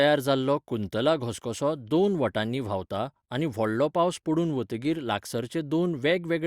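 No technical fault can be heard anywhere in this speech recording.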